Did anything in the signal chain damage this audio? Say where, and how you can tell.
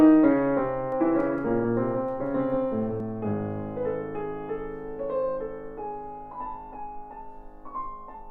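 Yes. From 0.92 s to 3.00 s the sound is doubled: a second, full-band copy trails the original by about 200 ms, at about 5 dB lower level, with no decay or room colour. It switches on and off abruptly at those times. This is most likely a doubled audio track from the capture or driver stage, where a slower second path records the same signal. On a spectrogram, every feature reappears as a fainter duplicate shifted right. The waveform shows a lagging echo layer.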